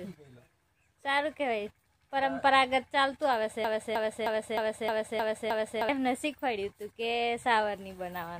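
From 3.64 to 5.89 s a broken-record loop repeats one 310 ms fragment seven times, likely a stalled stream; the waveform shows identical tiled blocks.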